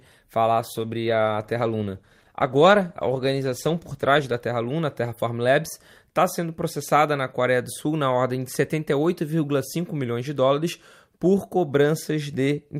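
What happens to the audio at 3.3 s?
At 3.3 s the speech sits inside a call bitrate drop lasting from 0.47 s to 4.45 s. The call's bandwidth estimate fell, so the encoder was given far fewer bits and coded more coarsely, trimming the top frequencies. The result is muffled, watery speech, consistent with a fall from around 64 kbps to roughly 17 kbps, held for about 3.9 s. Unlike packet loss, nothing drops out or glitches; the speech stays degraded across the span, then clears.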